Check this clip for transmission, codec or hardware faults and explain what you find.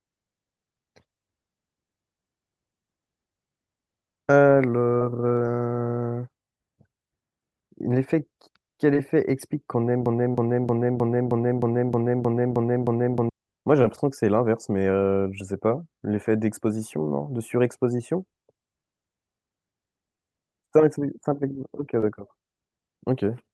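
Two kinds of fault are present, a broken-record loop and several short concealed packet losses, carried over a call path whose Opus coding rolls off the top end above about 12 kHz.

Short concealed packet loss occurs at 4.96–5.02 s, 8.94 s, 10.32–10.35 s, 13.83 s and 22.01–22.03 s. Between 10 and 40 ms of audio arrived too late, and the decoder bridged each gap by extending the preceding sound. The result is a brief smear or wobble. It differs from a loop because nothing repeats.

The broken-record loop runs from 10.06 to 13.29 s. The same 0.31 s fragment plays ten times back to back, most likely because the stream stalled and kept resending its last buffer, so the intended audio is lost. Exact repetition distinguishes it from concealment's short, varied fill.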